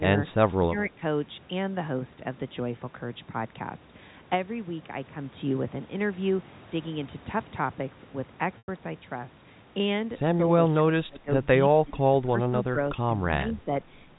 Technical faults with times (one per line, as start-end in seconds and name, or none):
0.63-1.02 speech suppressed in double talk
8.58-8.68 packet loss with pitch repetition
10.70-11.30 speech suppressed in double talk
11.84-11.98 speech suppressed in double talk
12.31-12.77 speech suppressed in double talk
13.59-13.71 speech suppressed in double talk